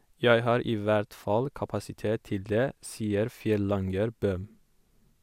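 No technical faults can be heard anywhere in the speech.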